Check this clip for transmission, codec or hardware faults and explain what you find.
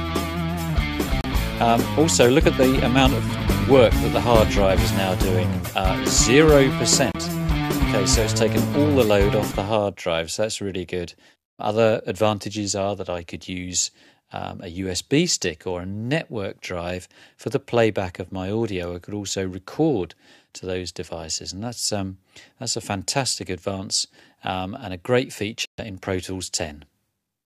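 Three brief dropouts occur, at 1.21 s, 7.12 s and 25.65 s, with silences of about 32 ms, 29 ms and 130 ms. The sound cuts out and resumes. This points to a Bluetooth stall, likely from radio interference delaying packets until the headphones' buffer emptied.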